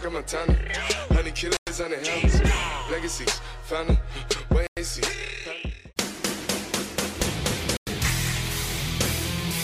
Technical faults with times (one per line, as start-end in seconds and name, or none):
1.57-1.67 gap between chunks
4.67-4.77 gap between chunks
7.77-7.87 gap between chunks